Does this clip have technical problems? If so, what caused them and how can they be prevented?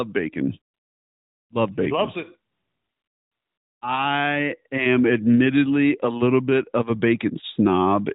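Yes. AMR comfort noise at 0.74–1.50 s and 2.52–3.82 s, between "bacon loves it" and "I am admittedly a": the phone stopped sending speech frames and substituted smooth synthetic noise for the real background. To prevent it, disable discontinuous transmission on the call path.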